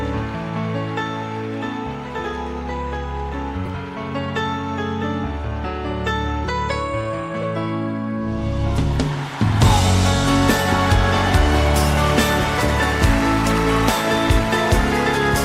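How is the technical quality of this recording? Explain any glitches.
Three short glitches are corrupt frames that were decoded anyway, at 3.65–3.68 s, 7.41–7.45 s and 14.49–14.52 s. Flipped bits in each compressed frame gave the decoder wrong gains and codes, so energy landed at wrong frequencies. Each is heard as a brief chirp or noise burst, the outer two peaking near -15 dBFS, with the middle one slightly longer and quieter, near -20 dBFS.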